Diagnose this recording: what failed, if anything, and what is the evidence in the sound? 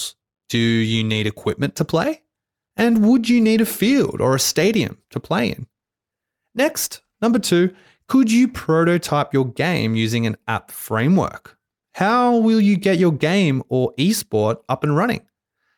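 Nothing failed; no fault is audible at any point.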